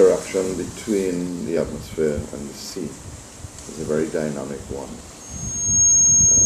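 At 3.86 s there is an abrupt forward jump in the sound, and no gap of silence between the two sides. This is a dropped buffer (overrun), likely caused by the capture software failing to read a block of samples before the hardware wrote over it. Around 20 ms of audio is missing, and the material on either side of the loss is butted together directly, which produces the discontinuity heard as the jump.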